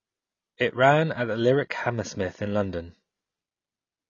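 Throughout, the speech is dull, with a smeared, warbling texture, likely AAC compression at a low bitrate around 24 kbps.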